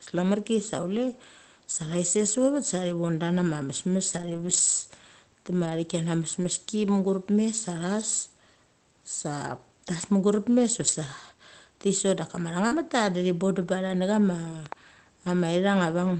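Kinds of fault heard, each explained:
Lost packet rebuilt from error correction: Speech packets missed the decoder, but the next packet held a low-bitrate spare copy, so no gap opens. The rebuilt stretch sounds grainier and noisier, not smeared. This happens at 4.13 to 4.59 s (240 ms), 5.61 to 5.71 s, 6.43 to 6.49 s just before "mugurep mes", 10.83 to 10.93 s, 12.71 to 12.77 s before "di thi bondem", and at 13.61 s and 14.51 s.
Short concealed packet loss: At 12.67 to 12.73 s, about 40 ms of audio never arrived and had no spare copy. The decoder filled the gap by extending the last sound's pitch and spectrum, then faded back into the real signal. This gives a brief smear or wobble rather than the rough, noisy texture of a rebuilt copy. An error-corrected stretch follows immediately after it.
Loud pop: Two sharp pops sit on top of the speech between 14.66 and 14.74 s, peaking about 5 dB above it. 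They were likely caused by a voltage step from a plug, switch or static discharge entering the chain. Unlike the packet faults, nothing in the speech is lost or replaced. The sound keeps going underneath while the impulses are added to it.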